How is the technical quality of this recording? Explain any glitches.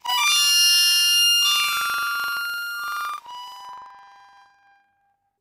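The recording is impaired throughout by one fault: planar audio read as interleaved. Each block carries all left-channel samples followed by all right-channel samples, but playback treats them as alternating left-right pairs. Each block therefore plays twice at double speed, once as left and once as right, keeping the overall pace intact. The sound sits an octave high with a flutter at about 23.4 Hz, matching blocks of 42.67 ms, which fits a 2048-sample block.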